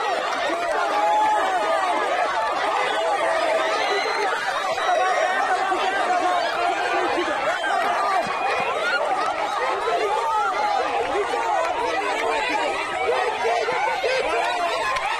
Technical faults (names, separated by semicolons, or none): chunks out of order